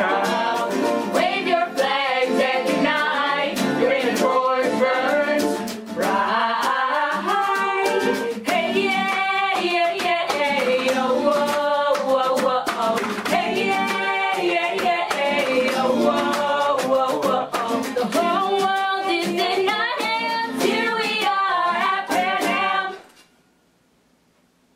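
No technical faults are audible.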